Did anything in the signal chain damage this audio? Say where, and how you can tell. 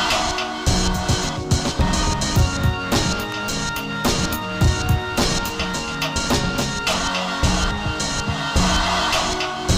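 Yes. At 3.32 s a single sharp snap sits on top of the sound, peaking at about -15 dB, an electrical switching spike. It is most likely a nearby switch or static discharge arcing into the analogue wiring, coupling one brief transient onto the line.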